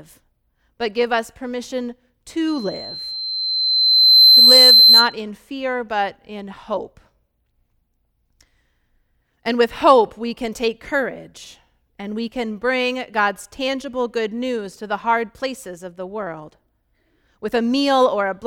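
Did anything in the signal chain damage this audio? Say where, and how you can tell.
Yes: loudspeaker feedback squeal, analogue mic-speaker loop gain above one; from 2.47 to 5.16 s a 4.1 kHz spectrogram line swells over about two seconds.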